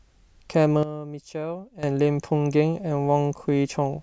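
At 0.83 s the speech and its background noise drop together by about 12 dB, recovering at 1.83 s: a sudden gain jump, likely an unramped digital gain change.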